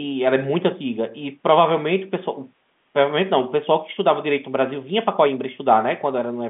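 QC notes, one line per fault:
No faults found; the speech sits in a telephone band of roughly 150 Hz to 3.5 kHz, as expected from G.711 A-law coding.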